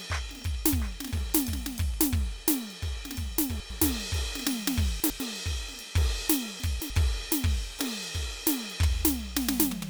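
Right from 0.05 s to about 1.95 s there's a train of clicks, around fifteen evenly spaced pops at roughly 8 per second, about as loud as the music, likely interference or a faulty connection. Then the music jumbles briefly at 3.6–3.8 s, 5.0–5.2 s and 6.6–6.9 s: chunks out of order, 100 ms pieces playing one chunk late, and two late in the last case.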